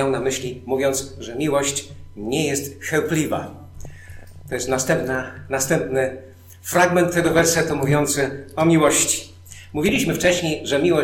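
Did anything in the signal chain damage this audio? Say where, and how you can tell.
Yes. DAB burbling, from the codec stage of a digital radio receiver, is audible from 3.83 to 4.81 s, 7.20 to 7.71 s, and 9.86 to 10.41 s. Short blips of noise in single sub-bands ride over the sound. Bit errors, likely around 0.5 to 0.7 percent, slipped past error correction into the MP2 data.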